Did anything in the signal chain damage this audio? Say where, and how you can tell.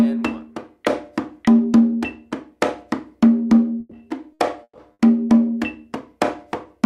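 Yes, at the network stage: a burst of packet loss hits the audio four times in quick succession, at 3.79–3.94 s, 4.33–4.42 s, 4.63–4.78 s and 4.93–5.02 s. Each gap is bridged by concealment, 120 ms in the first and third and 60 ms in the others: the receiver extends the last sound and fades it out, so it comes out as a held buzz or decaying hiss. In the third, the fill fades to silence for the final 50 ms. The audio then resumes with that stretch missing.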